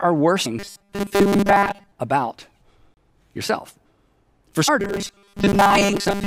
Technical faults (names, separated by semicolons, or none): compressed frames skipped; robotic sound from repeated short buffers; block of digital silence